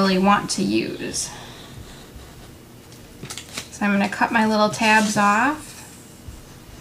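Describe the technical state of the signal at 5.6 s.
At 5.61 s the audio jumps forward where compressed frames were skipped. About 50 ms of material never reaches the output, consistent with a couple of whole frames being absent from the stream or discarded by the decoder as corrupt. It is heard as an abrupt jump, with the sound resuming slightly ahead of where it left off.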